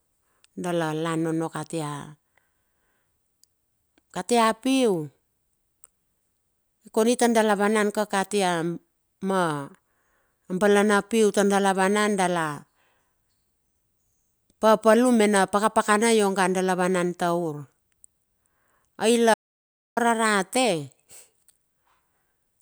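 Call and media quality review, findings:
Speech cuts out abruptly at 19.34 s and resumes at 19.97 s, about 0.63 s of dead silence with no room tone underneath. Audio dropout to silence. Likely cause: input lost upstream (device disconnect, link failure or momentary mute) while the recorder kept writing silence. Content in the gap is unrecoverable.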